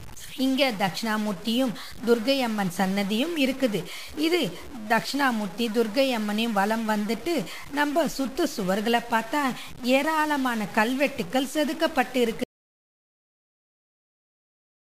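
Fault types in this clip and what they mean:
Stuck bit: Distortion runs throughout and fills even the pauses with noise, unlike clipping, which only affects peaks; likely one data bit stuck.
Audio dropout to silence: From 12.44 s to the end the sound cuts to total silence with no room tone, unlike a fade or gate; likely lost input.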